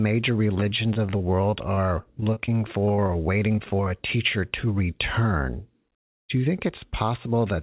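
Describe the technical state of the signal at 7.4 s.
At 7.4 s the speech is intact, with no fault at that moment; the sound carries the narrow bandwidth of a telephone-grade call path, with nothing above 4 kHz, which fits a G.711 mu-law codec running at 64 kbps.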